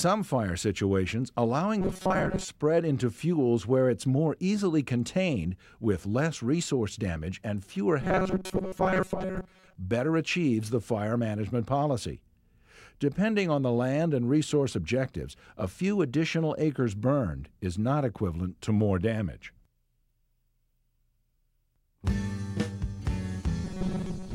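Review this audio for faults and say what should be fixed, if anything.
Robotic sound from repeated short buffers at 1.81–2.49 s, 8.01–9.75 s and 23.65 s to the end. In each stretch the sound becomes a rigid, metallic buzz at 188 Hz that only loosely tracks the underlying audio. The likely cause is audio arriving too slowly, so the playback fills most of each gap, roughly two thirds or more, by replaying a segment of about 5 ms, whose repetition rate sets that fixed pitch. Enlarging the jitter or playout buffer and keeping the audio source fed steadily would prevent these underruns.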